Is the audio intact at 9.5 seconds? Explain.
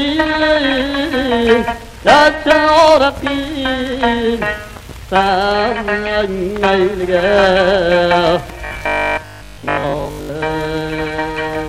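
No. Robotic sound from repeated short buffers runs from 8.65 to 10.31 s, likely because new audio arrived too seldom and the last 20 ms kept repeating while most of the real audio was skipped, forcing a rigid, metallic 50 Hz buzz.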